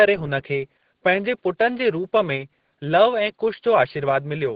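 Throughout the clip, Opus voice compression is working in its SILK linear-prediction mode at a starved rate, pointing to around 10 kbps, with the band capped near 8 kHz and the excitation coded coarsely. The speech sounds heavily muffled, hoarse and faintly robotic. The room noise sits about 53 dB below it.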